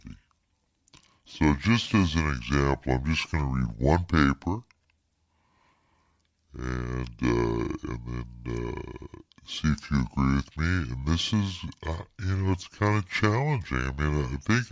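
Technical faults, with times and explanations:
Throughout, wrong sample rate: the speech plays at about two-thirds of its natural speed and roughly 7 semitones low, so voices sound deep, slow and drawn out. Speed and pitch drop together by the same ratio, which fits audio recorded at 24 kHz being played back at 16 kHz with no conversion. A pitch shifter would lower the voice while keeping the timing, and a time-stretch would slow it while keeping the pitch.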